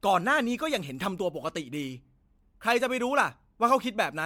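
Across the whole speech clip there is generation loss: a hollow, swirly smearing, with consonant attacks blurred more than a single encode would explain. It is likely the result of repeated lossy passes, about five, and the texture fits MP3 at around 96 kbit/s. On a spectrogram, flickering holes and speckled noise pile up between harmonics, and nothing appears above 19.8 kHz. The waveform shows softened onsets.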